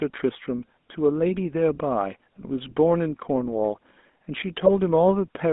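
Throughout, the speech has a buzzy, gravelly roughness inside a narrow band of roughly 200 Hz to 3.6 kHz. This is the GSM full-rate codec: it rebuilds the voice from a vocal-tract model driven by coarse, regularly spaced pulses, which fits its 13 kbps rate.

From 4.66 to 4.72 s the speech breaks into a brief squawk and gargle. These are GSM bit errors: corrupted filter, pitch or gain values bent the spectrum and level, which points to about three damaged frames.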